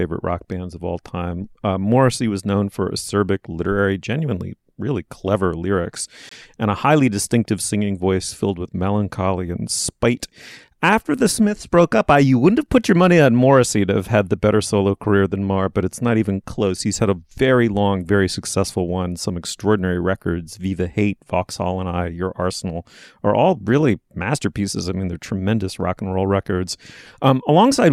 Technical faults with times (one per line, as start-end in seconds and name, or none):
6.29-6.33 Bluetooth dropout